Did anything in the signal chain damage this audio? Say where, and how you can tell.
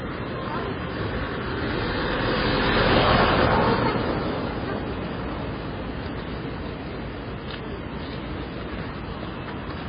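Yes. The damage most likely happened at the codec stage, where the audio went through heavy MP3 compression. Across the whole recording nothing is left above 5 kHz, a hard treble ceiling that the encoder imposes when it runs short of bits. The remaining sound is watery and swirling because weak frequency lines drop in and out from frame to frame, and attacks are smeared. Damage this severe fits a very low bitrate, around 16 kbps.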